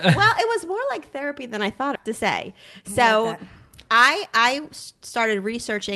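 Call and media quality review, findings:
Skip ahead, 1.95–1.97 s: abrupt forward jump with no fill. About a second of speech was discarded, and the two sides were spliced almost directly.

Jitter buffer speed-up, 2.06–5.92 s: speech runs at 107% speed with unchanged pitch. The receiver repeatedly trimmed pitch-period-sized pieces, about a third of a second in total, to drain the excess buffered delay.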